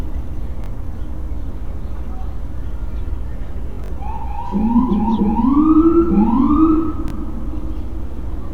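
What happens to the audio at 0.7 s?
A Bluetooth stutter runs from 0.64 to 0.70 s. About 43 ms of audio failed to arrive, which fits two lost packets, so the receiver replayed its last buffered slice as a short buzzing repeat. The sound then resumes further along, skipping the missing stretch.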